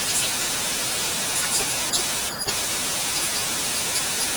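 From start to end the speech plays about 1.38 times too fast and roughly 5.5 semitones high, a wrong sample rate consistent with 32 kHz material played at 44.1 kHz. Unlike a pitch shift or time-stretch, speed and pitch rise together, giving a hurried, chipmunk-like voice.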